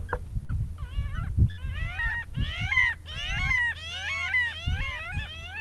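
At 0.43 s a burst of packet loss hits. For about 56 ms the receiver keeps the last sound going and fades it, so it smears into a held, fading sound. The audio then resumes with about 60 ms missing. The same happens at 1.51 s, with about 64 ms of fill and another 60 ms gone. Both gaps come from a call path whose top end stops near 12 kHz, which fits the Opus codec.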